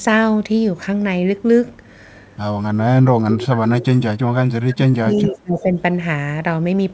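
From 2.77 to 3.85 s, and again from 4.52 to 5.72 s, the speech sinks by up to about 25 dB. Each time it dips and breaks up for about a second. This is speech suppressed in double talk, likely because the echo canceller heard both sides at once and turned everything down.

Inside the second dip, from 5.15 to 5.31 s, a faint copy of the speech returns 365 ms late, about 20 dB below the original. This is an echo leak, likely loudspeaker sound the far end's canceller failed to remove. The call audio stops at 8 kHz.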